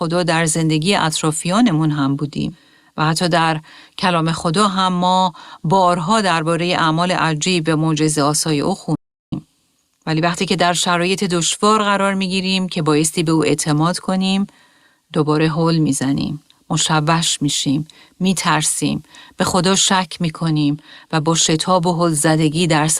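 At 8.95 s the speech cuts off mid-flow and falls into total silence, with no room tone, until it resumes at 9.32 s, so about 0.37 s of material is simply gone. This audio dropout to silence likely came from the input being lost while silence kept being written.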